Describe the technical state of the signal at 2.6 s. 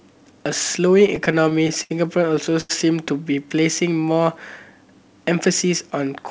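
At 2.6 s the signal is in a run of repeated stalls (stutter) from 2.36 to 2.71 s. Packets arrived late, so the jitter buffer kept running dry and the last sound was stretched through four short gaps, the longest 87 ms. Nothing is lost, but the speech drags and stutters.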